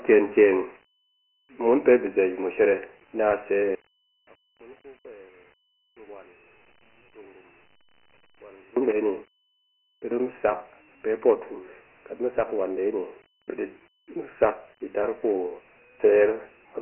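Dialogic VOX ADPCM runs throughout the speech. Each sample is coded as a 4-bit step, at a rate that fits 24 kbps, so nothing survives above 3 kHz, the lows fall away below 300 Hz, and heavy gritty hiss trails every syllable.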